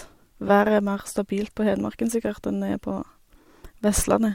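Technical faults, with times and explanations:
0.47–0.50 s, corrupt frame decoded: a brief squeaky blip cuts across the speech, peaking at about -15 dBFS. Damaged bits in what sounds like a single compressed frame were decoded anyway, so misread gains and codes put energy at wrong frequencies for that frame's duration.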